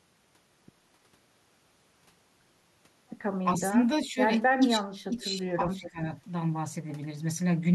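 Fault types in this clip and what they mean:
Speech suppressed in double talk: dips of about 10 to 20 dB between 3.58 and 6.0 s, likely echo-canceller ducking, showing as pinched waveform notches.
Echo leak: a faint copy of the speech, about 15 to 25 dB down, returns 316 ms late, likely uncancelled loudspeaker pickup, showing as delayed spectrogram traces.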